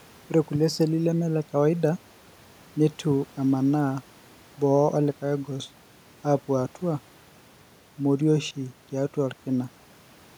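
A speech recording with no technical faults to be heard. Some background noise from the room sits underneath, about 32 dB below the speech.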